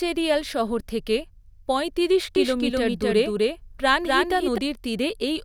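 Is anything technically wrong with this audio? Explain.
Yes. From 2.36 s to 4.58 s the speech has a doubled audio track: a second copy of the same speech, at about the same loudness as the first, trails it by roughly 300 ms. It is likely a second capture through a slower path being mixed back in. The copy is full-band and dry, with no decay or room colour, and it starts and stops abruptly. On a spectrogram the harmonic patterns repeat about 0.3 s apart, and the waveform shows overlapping duplicate envelopes.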